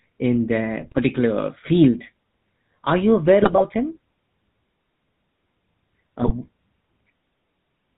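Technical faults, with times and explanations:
throughout GSM full-rate codec: the speech passes through a vocal-tract model excited by a sparse, regularly spaced pulse train, which fits the 13 kbps GSM full-rate coder. Nothing above 4 kHz survives, leaving a plainly audible buzzy, gravelly roughness over the whole clip.
0.80–1.01 s, 3.42–3.64 s, 6.20–6.33 s GSM bit errors: corrupted bits reach the decoder, scrambling filter, pitch and gain values for successive frames, consistent with a couple of percent of bits flipped. Each burst, about a fifth of a second or less, breaks into squawks, pops and gargling.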